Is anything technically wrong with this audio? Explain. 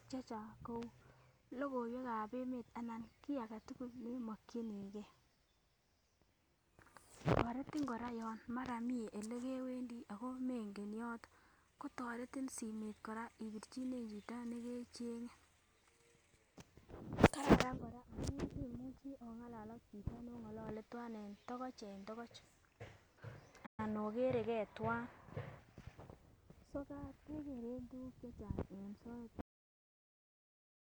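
Yes, there are two faults.

At 23.66 s the speech halts for 120 ms, then resumes. This playback stall likely came from the player running short of data.

At 29.41 s there is a cut-off end. The speech stops mid-sound into digital silence with no decay, because the final buffers never played.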